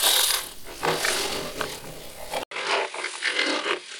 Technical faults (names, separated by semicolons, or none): input switched to a poorer device